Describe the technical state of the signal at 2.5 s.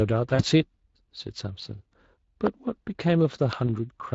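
A sharp single pop cuts in from 2.47 to 2.49 s, peaking about 20 dB above the speech, which carries straight on beneath it. This is a loud pop, likely from a sudden voltage step or pulse, such as a plug, switch or static discharge, added to the signal and shaped by the downstream circuitry.

Underneath, the speech sounds plainly hoarse and noisy. That is Speex codec damage: the CELP coder has too few bits for the excitation, and the character fits a Speex stream at roughly 20 kbps.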